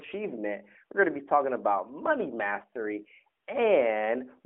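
Nothing's wrong here: it's a speech recording carried over a narrowband mobile line, and there's no technical fault to point out anywhere in it.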